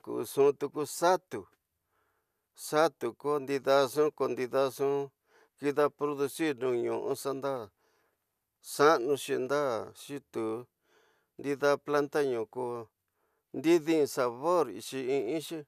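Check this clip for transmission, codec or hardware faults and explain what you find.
No transmission, codec or hardware faults can be heard in this recording of speech; the signal stays continuous and stable throughout, with nothing breaking into it.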